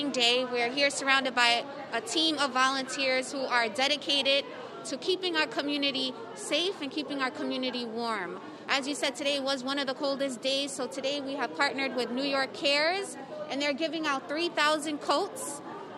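No technical faults are audible.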